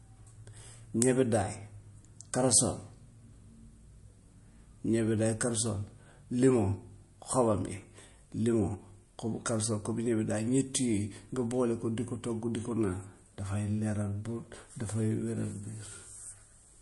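From start to finish the speech carries plainly audible damage of the kind MP3 compression leaves, likely from an encode at a low bitrate, something around 48 kbps. Nothing comes through above 11.3 kHz, so the top end sounds sliced off. With so few bits to spend, the encoder drops the treble at a fixed point and zeroes quieter frequency detail from frame to frame, which leaves the speech sounding thin and watery.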